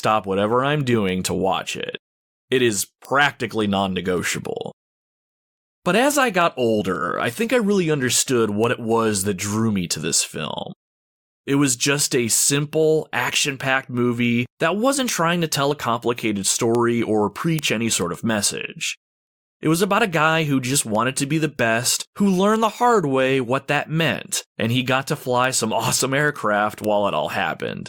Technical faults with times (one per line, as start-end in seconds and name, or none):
6.81 compressed frames skipped
15.71 compressed frames skipped